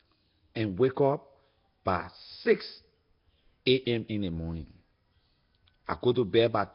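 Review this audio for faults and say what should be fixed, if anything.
The speech carries a rough, hissy halo and a smeared, underwater quality throughout. Nothing is heard above 5.3 kHz. This points to heavy Nellymoser compression, likely at a low bitrate near 22 kbps, where weak bands get no bits and are filled with noise. To prevent it, record or export with a modern codec at a higher bitrate.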